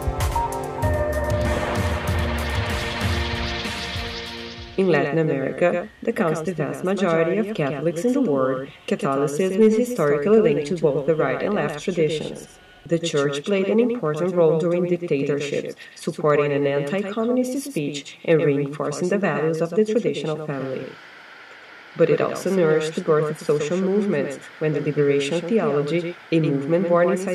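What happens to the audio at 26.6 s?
At 26.6 s you're still hearing the doubled audio track that runs through the whole clip: a full-band copy trailing by about a tenth of a second, roughly 5 dB down, with no decay or room colour. It's likely a second capture through a slower path.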